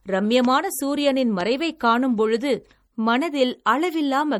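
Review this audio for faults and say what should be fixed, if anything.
Throughout the speech there is plainly audible MP3 compression, likely from encoding at a low bitrate, which fits something near 48 kbps. With too few bits, the encoder drops weaker frequency components, and they flicker in and out from frame to frame, giving a watery, swirly texture and smeared attacks. On a spectrogram this shows as blotchy, fragmented harmonics and holes between them, with a hard ceiling at 20.6 kHz and nothing above it. To prevent it, keep an uncompressed or high-bitrate master and encode once, at a higher bitrate, only at the final stage.

Two loud pops cut across the speech, from 0.45 to 0.47 s and from 1.41 to 1.43 s, each a single pop about 10 dB above the signal. They are likely caused by a sudden voltage step or pulse, such as a plug, switch, static discharge or driver glitch, added on top while the speech continues underneath. 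On the waveform each appears as a narrow spike standing well above the surrounding speech. On a spectrogram each is a thin vertical stripe spanning the frequency range. To prevent them, secure connectors, avoid switching or handling equipment while recording, and check drivers and grounding.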